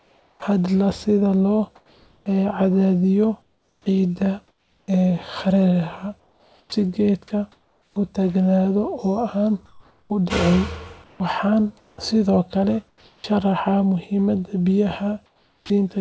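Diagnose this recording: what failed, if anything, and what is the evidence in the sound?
Call processing, at the sender's voice detector. From 0 to 0.42 s and from 15.26 to 15.70 s, the real background gives way to steady, featureless comfort noise. It is about 5 dB and about 10 dB quieter. The likely cause is discontinuous transmission filling pauses with synthetic noise.

Same stage. The speech begins abruptly, without its soft start, at 0.39 to 0.42 s, losing 30 ms. It happens again at 15.58 to 15.70 s, losing 120 ms. The detector likely reacted late, so comfort noise stood in for those opening moments.

Same stage again. The speech is choppy from 1.76 to 4.88 s, with 1.34 s replaced. It recurs from 6.20 to 7.96 s, with 0.96 s replaced, and from 9.66 to 13.24 s, with 1.16 s replaced. This is sound chopped by the voice detector, likely toggling transmission repeatedly.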